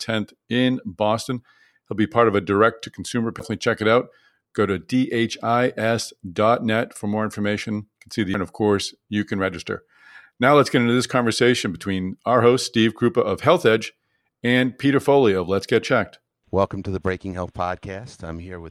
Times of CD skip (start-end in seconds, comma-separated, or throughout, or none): 3.39, 8.34